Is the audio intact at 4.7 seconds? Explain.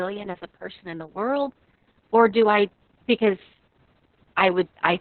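No. At 4.7 s the speech is under Opus voice compression, as it is throughout the clip. Nothing survives above about 4.3 kHz, and the coarse SILK excitation at a rate near 6 kbps makes it hoarse and robotic, not just muffled as a simple low-pass filter would.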